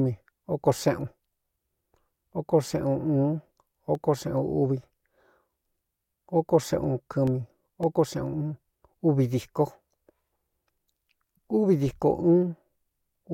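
Speech with CD scratch ticks: six fast ticks from 3.39 to 4.09 s and seven from 7.13 to 7.97 s. The disc's error correction couldn't rebuild the scratched data on each turn, so the player muted or interpolated it in brief gaps of a few milliseconds.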